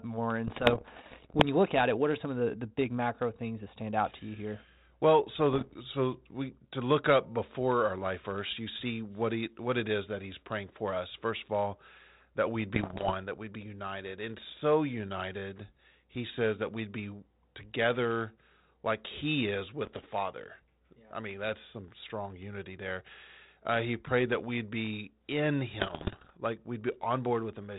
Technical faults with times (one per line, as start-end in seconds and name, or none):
0.47-1.43 bit errors on an ADPCM link
5.53-5.77 bit errors on an ADPCM link
12.74-13.11 bit errors on an ADPCM link
19.84-20.06 bit errors on an ADPCM link
25.80-26.33 bit errors on an ADPCM link